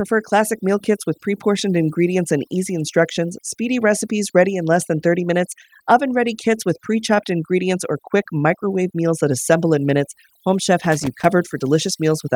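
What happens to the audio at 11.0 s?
Right around there, from 10.79 to 11.25 s, you get loose connector crackle: a worn or dirty contact making and breaking, chopping the signal into an irregular scratchy burst. Underneath, the overdone noise removal is still running, with near-silent gaps flecked by twinkly specks.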